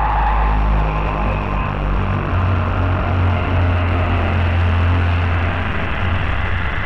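No technical faults are audible.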